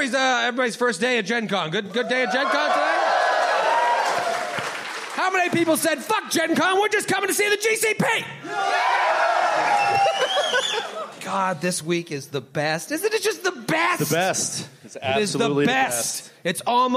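Nothing in this one trips the ear: no dropouts, glitches or other technical faults turn up anywhere along the way.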